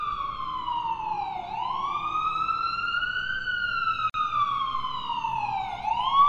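A recording of sounds with a 44 ms dropout from 4.10 to 4.14 s, a gap at a join of encoded pieces, where untrimmed encoder delay and padding left silence.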